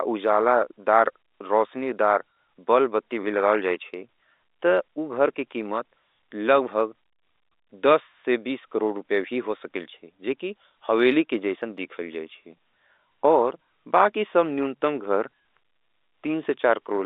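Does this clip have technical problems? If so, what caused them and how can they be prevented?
No technical problems here.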